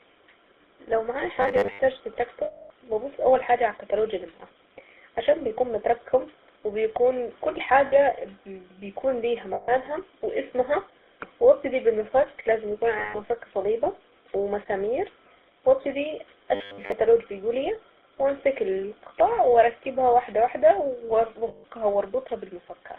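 The whole recording passes through the GSM full-rate codec. Nothing appears below about 300 Hz or above 3.7 kHz, so a spectrogram shows a hard-edged band with empty space above it. The codec rebuilds the vocal tract from a filter model driven by a thinned, pulse-like excitation, which fits a 13 kbit/s full-rate stream. The result is a plainly audible buzzy, gravelly roughness, and the harmonics look smeared and grainy instead of clean.

From 1.42 to 1.79 s, just after "لو معايا", there is robotic sound from repeated short buffers. The likely cause is audio arriving too seldom, with playback looping a roughly 10 ms chunk to fill the gaps, so about half of this stretch is repeated material. The loop imposes a rigid 100 Hz metallic buzz that only loosely tracks the speech. On a spectrogram it appears as flat, evenly spaced horizontal lines at multiples of 100 Hz, and the waveform shows an identical short cycle repeating.

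Lost GSM frames follow at 2.44 to 2.71 s (260 ms), just before "ابص اول حاجة على". The decoder replays the parameters of the last good frame. This produces a held, rough, ringing tone. On a spectrogram the formant pattern freezes into a smear across the gap.

Further lost GSM frames fall at 9.54 to 9.69 s (140 ms) and at 12.98 to 13.20 s (160 ms). Each gives a shorter version of the same frozen metallic ring.

The robotic sound from repeated short buffers returns from 16.55 to 16.92 s, between "صليبة ومسامير وابتدي" and "بيقول ايه وامسك القطع". This time most of the stretch is repeated, so the 100 Hz buzz and the flat harmonic comb dominate it more heavily.

The last lost GSM frames come at 21.48 to 21.65 s (160 ms), again as a brief static metallic smear.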